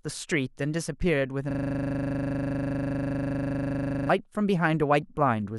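From 1.51 s to 4.09 s the speech locks into a system hang loop: the driver stalled while the hardware kept replaying one 40 ms buffer, repeating the same fragment dozens of times. The sound becomes a hard, rattling buzz at 25 Hz.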